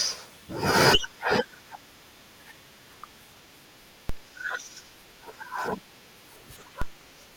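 A low thump cuts under the speech three times, at 0.95 s, 4.09 s and 6.82 s, while the talking itself carries on unchanged. Each is a DC step: the waveform's zero line suddenly jumps by about -18 dBFS. A high-pass around 5 Hz then pulls the offset back toward zero, so each jump is heard as a brief low-frequency knock rather than a lasting shift.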